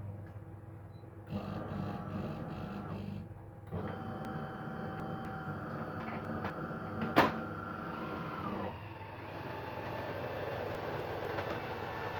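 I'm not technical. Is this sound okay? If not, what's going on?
No. This clip has chunks out of order, at 4.25 to 5.25 s, 6.0 to 6.5 s and 10.75 to 11.25 s. A quarter-second piece plays late, three pieces late at first, then one. Nothing is missing, but each spot sounds jumbled.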